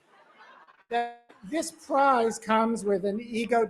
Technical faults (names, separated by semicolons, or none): noise suppressor applied to music or sounds; sound cut by the noise suppressor; repeated packet loss (robotic sound); long network dropout